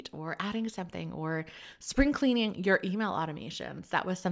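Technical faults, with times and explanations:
No technical faults heard.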